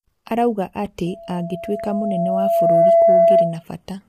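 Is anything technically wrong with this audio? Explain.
Yes, there are two faults. Throughout, the speech is likely coded with low-delay AAC compression at a low rate, around 32 kbps. Its short frames blur the harmonics, leaving rough, grainy speech with noise between them. From 1.06 to 3.63 s, a loudspeaker feedback squeal builds as the microphone re-amplifies its own loudspeaker. A 671 Hz tone swells over about two seconds to about 10 dB above the speech.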